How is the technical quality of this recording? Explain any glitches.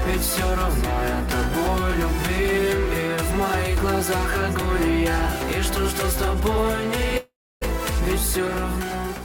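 Two faults degrade the quality: a constant roughness and one clear gap near the end.

Sample clock jitter runs throughout. The converter's clock wanders by roughly a microsecond or two, so samples land slightly off time. Steep, loud and bright passages pick up a grainy hiss, perhaps 35 dB down, which disappears in quiet moments.

A long network dropout runs from 7.17 to 7.63 s, likely from a stretch of packets that never arrived. The receiver extends the last sound as a fading buzz, then leaves about 0.3 s of near-silence. Playback resumes with roughly 0.44 s of audio lost.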